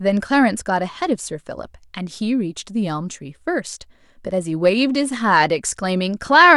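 No technical faults can be heard anywhere in the recording, and the signal stays steady and intact throughout.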